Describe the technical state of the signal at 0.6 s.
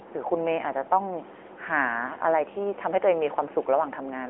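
At 0.6 s you're hearing the AMR narrowband mobile codec, and it's there for the whole clip. Everything above about 3.7 kHz is gone, the speech sits in a 300 to 3400 Hz phone band, and the buzzy, synthetic edge fits a mid-rate mode around 10 kbps.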